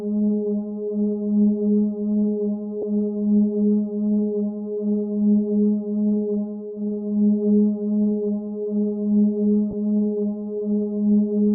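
At 2.82 s and again from 9.71 to 9.73 s, lost LE Audio frames leave short, noisy smears. The LC3 decoder fills each gap by replaying the previous spectrum with randomised signs. The gaps point to one and then two missing 10 ms frames.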